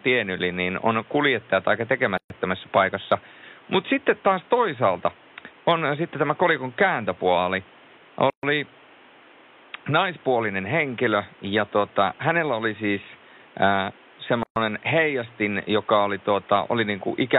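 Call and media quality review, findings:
Speech drops to silence for about 130 ms at 2.18–2.30 s (after "niin on kuljettajat aika"), 8.30–8.43 s, and 14.43–14.56 s (between "hänellä oli siis äh" and "heijastin joka oli"). The edges are smeared, the room noise, about 29 dB under the speech, drops out with it, and the speech resumes where it stopped. The gaps recur every 6 s. This is a gap at a join of encoded pieces: 6 s segments were encoded separately and concatenated untrimmed, leaving encoder start delay and last-frame padding in.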